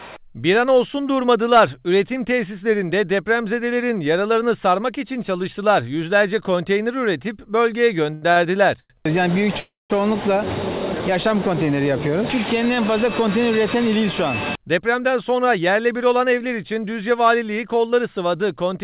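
At 8.14, 8.32 and 8.80 s come three short stalls from a late packet. Each time the jitter buffer ran dry. The last sound is held for 78, 40 and 98 ms, with a faint buzz or dip. Then the audio resumes with nothing lost.

From 9.60 to 9.92 s there is a call audio freeze. The likely cause is packets held up in transit, which emptied the buffer. The last sound drags on as a fading buzz or hiss for about 0.1 s. The final 180 ms is silent before the audio picks up where it stopped.

From 14.57 to 17.45 s a jitter buffer speed-up is heard. After the earlier delays, the buffer held too much audio. Tiny pitch-period slices were cut out, about a fifth of a second in total. The sound runs 6% fast and feels hurried, though the pitch is unchanged. Throughout, the narrowband G.711 call path leaves nothing above 4 kHz.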